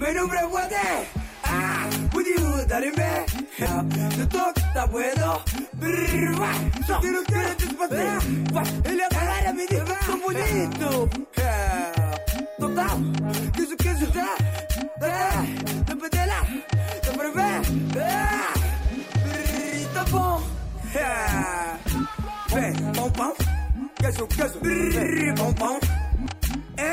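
You'll catch five tiny blips in the audio, at about 3.65, 6.81, 10.40, 15.65 and 26.26 s, each gone in under 20 ms. That's damaged data in a compressed stream: some bytes in the coded file were mangled, so the decoder misread the frame at each spot, lost its footing, and had to hunt for the next valid frame header before picking up cleanly again. The glitches are scattered at irregular intervals rather than on a regular beat.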